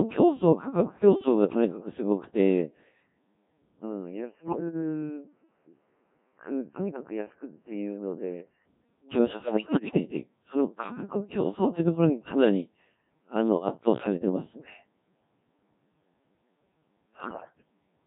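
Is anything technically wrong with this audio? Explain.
Yes. The speech sounds robotic and buzzy from start to finish, with a smeared, synthetic quality. This is heavy Codec 2 vocoder damage. Only pitch, voicing, energy and a coarse spectral envelope survive, and the decoder rebuilds the voice from sine waves. The very thin result points to a rate around 1.3 kbit/s.

Three short stretches break into bleeps, warbles and gibberish, with sudden jumps in pitch, loudness and tone colour: 4.41 to 4.60 s, 9.44 to 10.00 s, and 17.20 to 17.53 s. These are bit errors on digital voice radio. At a high error rate, roughly one bit in seven, corrupted bits scramble each affected frame's pitch, level, voicing and spectrum.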